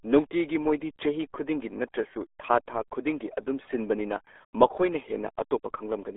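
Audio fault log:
throughout: RealAudio 14.4 codec. The speech sits in a narrow 300 Hz to 3.6 kHz band with nothing above 3.8 kHz. Unlike a clean telephone band-limit, heavy coding damage leaves it muffled and gargly, which fits an 8 kbit/s dial-up speech codec.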